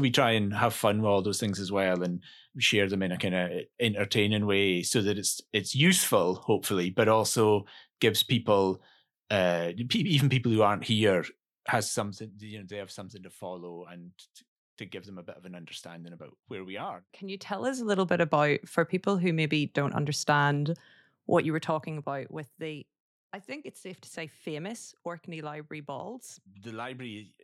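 From 11.68 to 12.46 s the level drops by roughly 15 dB, then climbs back by a similar amount from 17.24 to 17.93 s. Both moves carry zipper noise: the gain jumps in unsmoothed steps, around a hundred a second. This produces a buzzy ticking during each move, unlike a clean fader ramp.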